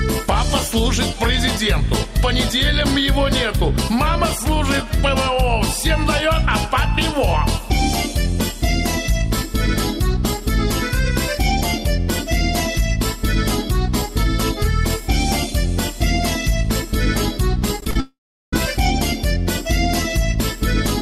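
At 17.80 s the sound turns choppy until 17.96 s. This is repeated packet loss. Audio packets went missing four times in quick succession. Each hole was patched by stretching the sound just before it. About 58 ms of patched sound covers about 50 ms of lost audio, roughly a third of the stretch. The longest hole is 18 ms. Pieces of the sound are missing.

From 18.00 s to 18.53 s comes a long network dropout. Almost all of this half-second never arrives. The receiver first extends the last sound as a fading buzz or hiss. Then about 380 ms of near silence follows. Sound resumes at 18.53 s, with the missing part simply gone. The likely cause is an interruption in the network connection rather than the recording itself.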